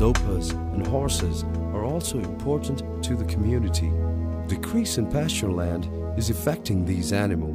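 No technical faults can be heard anywhere in the recording.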